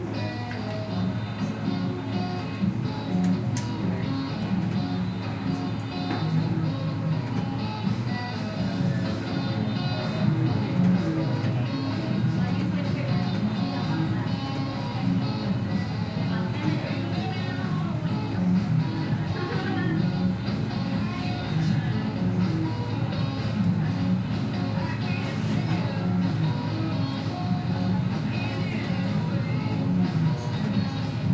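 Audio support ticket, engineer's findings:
No audible faults found across the recording of sounds; nothing to flag or escalate, ticket can close.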